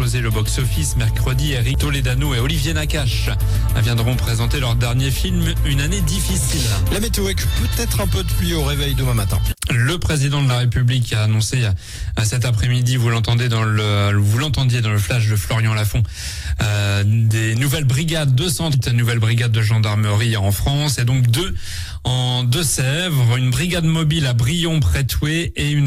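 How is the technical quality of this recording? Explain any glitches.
Two brief glitches interrupt the recording, both from damaged data in a compressed stream. They fall at 1.74 s and 18.74 s, each a momentary disturbance. At those points part of the encoded data was corrupted, so the decoder could not read the affected frame correctly, lost sync and had to search for the next valid frame header before it could resume. Each one is heard as a short chirp or blip cutting across the sound.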